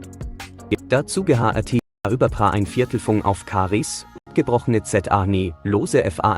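Blocks of digital silence at 1.79–2.05 s (256 ms) and 4.18–4.27 s (about 85 ms, fitting a 4096-sample buffer at 48 kHz) cut the sound abruptly to silence, likely where output buffers went unfilled.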